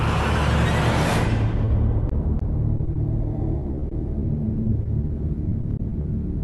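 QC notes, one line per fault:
1.65–1.69 s, short concealed packet loss: about 20 ms of audio never arrived in time, a gap that fits a single 20 ms packet. The decoder extended the last sound and crossfaded back into the real signal, so a brief smear or wobble replaces whatever was there. On a spectrogram the harmonics run flat and frozen for that sliver before rejoining. The waveform shows a copied cycle pattern with no new detail.
2.09–2.97 s, 3.59–4.23 s, 4.63–5.11 s, 5.49–6.05 s, repeated packet loss (robotic sound): the four stretches have 5, 6, 5 and 5 gaps, each up to 20 ms. Concealment fills about 11%, 19%, 21% and 18% of each span. The patches arrive close together, so the audio turns choppy, with pieces missing. A spectrogram shows short, evenly frozen harmonic blocks striped across each run, under the Opus call path's 12 kHz ceiling. The waveform shows repeated, looped-looking cycles.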